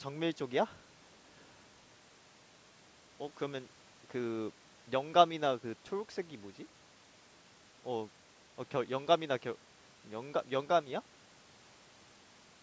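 Speech through a call's microphone processing, with nothing technically wrong.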